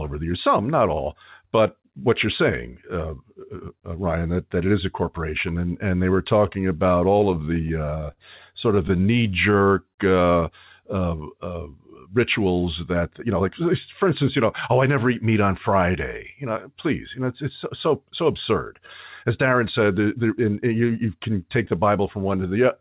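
Repeated stalls (stutter) occur from 7.32 to 8.19 s and again from 8.75 to 9.35 s. The jitter buffer kept running dry, and the receiver stretched the last sound to cover six gaps of up to 55 ms, then five gaps of up to 12 ms. Nothing is lost, but the speech catches and drags. On a spectrogram these show as short smeared, frozen harmonic patches. A jitter buffer slow-down follows from 9.52 to 10.09 s. Repeated pitch periods add 77 ms, so speech plays at 88% speed with unchanged pitch. The waveform shows periods copied back to back, and the spectrogram shows stretched formants. A jitter buffer speed-up from 12.06 to 12.60 s removes about 70 ms of pitch periods. Speech runs at 110% speed and sounds hurried, and the spectrogram shows compressed, slightly abrupt transitions. Throughout, nothing appears above 4 kHz, which points to a narrowband telephone codec such as G.711.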